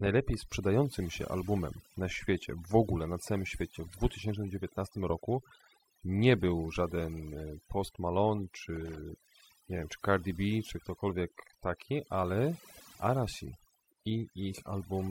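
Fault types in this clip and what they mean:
Overdone noise removal: A noise reduction stage set far too aggressively runs across the whole speech clip. Wherever a frequency band sits close to the level it takes for noise, the processor cuts that band deeply or mutes it entirely, taking the quieter parts of the voice with it. The gaps between phrases drop to near silence with small twinkling artefacts.
Loose connector crackle: A worn or dirty contact opening and closing rapidly chops the signal, and any DC on the line turns each break into a pop. Here it shows as two short, irregular bursts of scratchy crackle. The first runs from about 3.97 to 4.15 s, directly after "na całym świecie w", and the second from about 8.76 to 8.99 s, each lasting roughly a fifth of a second.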